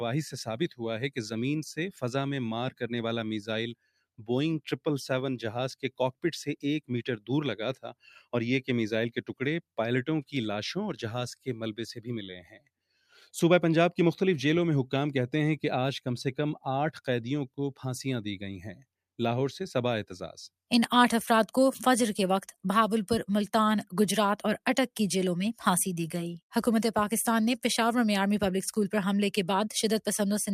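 A noise suppressor built for speech is applied to this sound throughout. It treats sustained material as noise, so level swings by around 5 dB as held parts and tails are pulled down while attacks pass, giving a pumping, thinned character. Sound cut by the noise suppressor appears at 3.74–4.02 s (about 15 dB), 5.8–6.24 s (about 21 dB), 7.74–8.04 s (about 17 dB), 9.15–9.35 s (about 13 dB), 12.38–12.7 s (about 21 dB) and 12.91–13.17 s (about 14 dB). Each is a brief dip where steady content sinks or its decay is clipped short.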